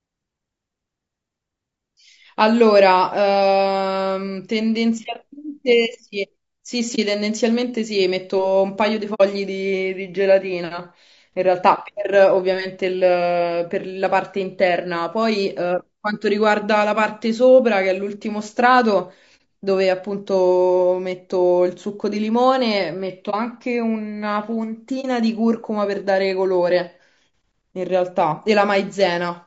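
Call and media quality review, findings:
Speech throughout rough and grainy. Noise fills the gaps between harmonics. The top band sounds thin and synthetic. Damage plainly audible. Likely cause: low-delay AAC compression (AAC-ELD) at a low rate, fitting about 32 kbps. Short frames resolve pitch harmonics poorly.

Brief soft-edged dropouts at 6.95–6.99 s, 9.14–9.21 s, 19.37–19.40 s, 23.30–23.34 s and 25.01–25.05 s. AAC frame loss with muting. The decoder zeroes the missing spectrum. Overlapping windows fade the sound out and back in. The 9.14 s gap is longest, consistent with two consecutive frames.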